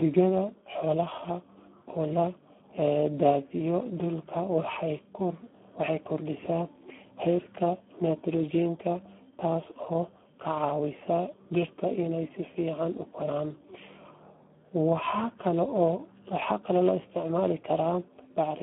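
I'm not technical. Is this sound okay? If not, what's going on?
No. Throughout, the speech shows heavy Speex codec damage. This low-quality voice-chat compression makes it hoarse and buzzy, and cuts everything above about 3.8 kHz, so it sounds muffled.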